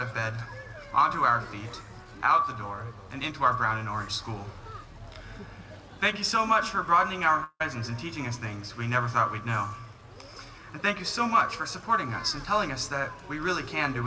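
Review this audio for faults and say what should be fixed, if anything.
From 7.44 to 7.62 s the audio cuts out. The last sound is stretched into a fading buzz that ends in about 30 ms of silence, and the audio resumes with 160 ms lost. This is likely a long network dropout concealed by the receiver. Everything stops at 8 kHz, which is the normal limit of the G.722 call path. To prevent this, use a more stable network connection, or add redundancy or forward error correction, so that stretches of lost audio are rarer.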